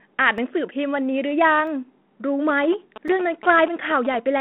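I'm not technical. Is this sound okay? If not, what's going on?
No. There are two problems in this speech clip.

The first is a block of digital silence, which happens three times: at 0.38 s, at 1.67 s, and at 3.08 s. The sound stops dead for a tiny moment and then comes straight back with no fade, so you hear a sharp tick. The first two are extremely brief. The one at 3.08 s lasts about 5 milliseconds and sounds more like a tick or a small dip. Each is a single isolated click rather than part of a rhythm. It most often happens when the playback software is late refilling its buffer, and the 3.08 s gap fits a 256-sample buffer.

The second is GSM signalling bursts, from 2.49 s to 4.16 s. A 2G mobile phone nearby was exchanging brief radio messages with the network, and the audio circuit picked them up. What sets it apart from the silence gaps is that it keeps going: a galloping dit-dit-dit of ticks and short buzzy patches. 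The buzz has a steady low pitch of about 217 Hz, and it sits under the voice.

The muffled, telephone-like quality comes from the phone-line coding and is normal for this kind of line.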